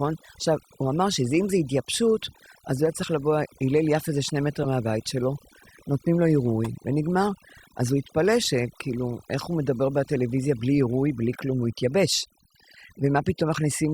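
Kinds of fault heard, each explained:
Overdone noise removal: A noise reduction process was pushed too hard across the whole speech clip. It cuts individual frequency bands deep whenever they sit near its noise estimate. Quiet parts of the speech are removed along with the noise. Between phrases the background drops, dotted with twinkling, warbling specks. The effect never lets up.
Corrupt frame decoded: Damaged bits reached the decoder, which played the frames anyway. Misread gains or codes put energy at the wrong frequencies for the length of those frames. Each event is a short chirp, squeak, blip or burst of noise. They land at 4.63–4.66 s, 6.64 s and 11.33–11.36 s. The first two span around two frames, the last about one. The first peaks near -15 dBFS, the second near -20 dBFS, the last near -30 dBFS.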